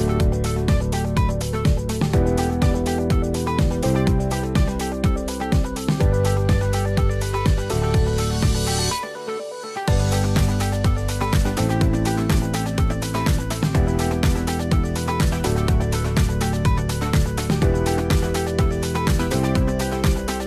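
No technical faults are audible anywhere in the clip.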